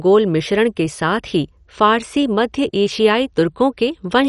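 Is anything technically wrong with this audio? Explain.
Yes. MP2 compression damage runs throughout the speech. Nothing is present above about 11.3 kHz, and the sound is dull with a gurgling, granular texture. The likely cause is MPEG Layer II coding at a low rate, around 48 kbps, where upper sub-bands are switched off and the remaining ones are coarsely quantised.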